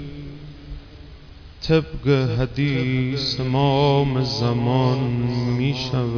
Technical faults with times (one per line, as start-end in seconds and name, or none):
none